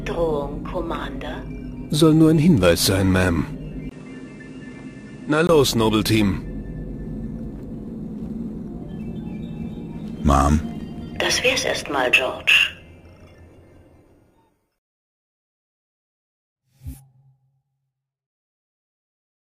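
From 3.89 to 5.49 s the input was likely switched to a poorer device, which cut in after a 20 ms silence. That narrower path passes nothing above 11 kHz, so the sound turns duller and somewhat quieter over a faint new background noise, then clears again.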